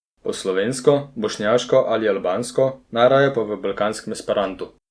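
No technical faults can be heard anywhere in the speech recording; the signal stays steady and intact throughout.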